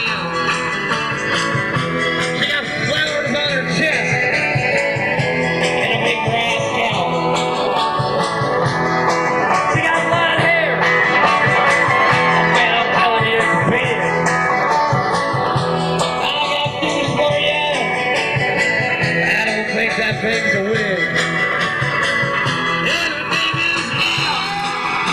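Channels drifting apart runs throughout the audio: the two channels sit on clocks that disagree by roughly 70 ppm, so the delay between them creeps up to under a millisecond by the end. Summed to mono, the moving comb notches produce slow flanging.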